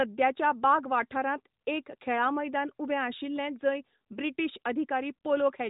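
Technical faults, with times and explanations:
No technical faults, with times and explanations, to report.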